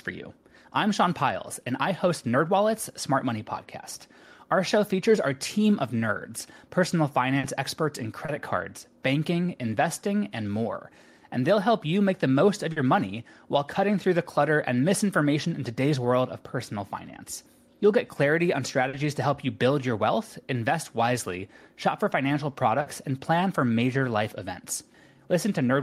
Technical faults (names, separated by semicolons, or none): burst of packet loss; short concealed packet loss